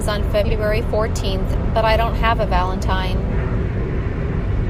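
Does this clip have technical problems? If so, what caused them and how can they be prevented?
Yes. Frames out of order: two neighbouring runs of about 40 ms, consistent with four frames each, were decoded swapped. This causes garbled flutters at 0.44–0.53 s, before "fourteenth but I don't", and at 4.34–4.42 s. To prevent it, reorder frames by sequence number in a jitter buffer before decoding.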